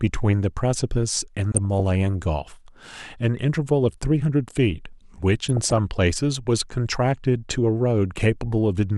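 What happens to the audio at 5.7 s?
Weak DAB reception is letting bit errors slip past the error correction into the MP2 audio data. The result is DAB burbling from 5.49 to 5.78 s. Corrupted samples put short blips of noise in single sub-bands, and corrupted scale factors make sub-bands jump in level for up to a frame. The speech is overlaid with burbling from a couple of dozen damaged frames at a bit error rate of around 0.2 percent.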